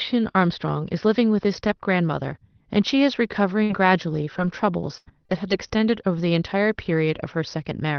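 From 3.63 s to 5.70 s the speech breaks up with repeated packet loss, giving a robotic sound. Four short dropouts, the longest about 81 ms, are each patched by stretching the preceding sound. This smears roughly a third of a second into choppy, robotic repeats with fragments missing. On a spectrogram these patches show as flat, smeared harmonic bands. The waveform shows repeated, uniform cycles in place of natural variation, all below the 6 kHz ceiling of the Opus call path.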